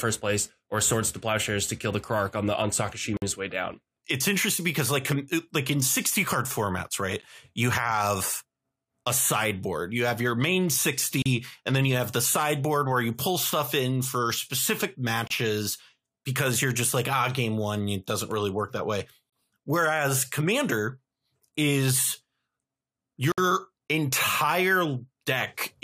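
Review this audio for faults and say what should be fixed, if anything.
Gaps between stream segments show up at 3.17, 7.22, 11.22, 15.27, 19.30 and 23.32 s, right on the 4 s segment boundaries. Each is a hard-edged silence of about 12 to 60 ms where the player pads out a timestamp gap. No speech is lost, just paused. To prevent it, have the packager make each segment's start time match the previous segment's end exactly.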